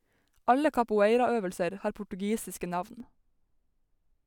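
From 3.00 s to the end at 4.26 s, just after "capoeiraøvelser har portugisiske", the speech turns dull and muffled. This is de-emphasis applied wrongly: a treble-cut filter meant to reverse pre-emphasis acted on a signal that carried none, or was run a second time. The response falls smoothly with frequency, about 11 dB down at 10 kHz relative to 1 kHz, so sibilants and consonant detail lose their edge and the voice sounds veiled.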